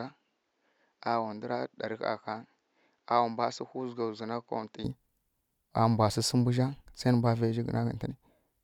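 From the start to 4.84 s the speech sounds narrower and duller, with nothing above 7.6 kHz, a level roughly 10 dB lower, and a faint background noise of its own. At 4.84 s it opens up abruptly, with no gap. This is likely an input switched to a poorer device. A simple low-pass filter would not also shift the loudness and the noise floor together at one clean step.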